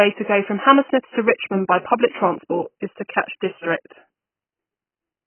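Throughout, the speech sounds dull and smeared, with nothing above 3.1 kHz. This is likely AAC compression at a very low bitrate, around 12 kbps.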